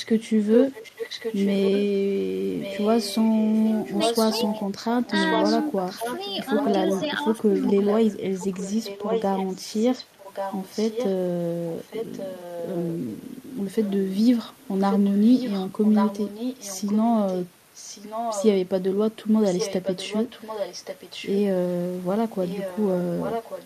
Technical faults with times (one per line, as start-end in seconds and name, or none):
0.04-1.83 echo leak
2.60-7.01 echo leak
7.05-7.26 speech suppressed in double talk
7.54-11.14 echo leak
11.80-18.48 echo leak
19.45-21.38 echo leak
22.44-23.65 echo leak